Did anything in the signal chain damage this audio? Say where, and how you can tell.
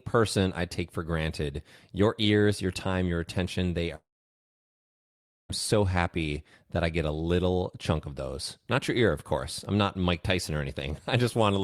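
Yes. This is a long network dropout, at 3.95 s to 5.51 s. The sound turns into a short fading buzz or hiss, then roughly 1.45 s of near silence. The receiver stretched the last audio, then gave up. When sound resumes, that stretch is gone, likely lost in transit.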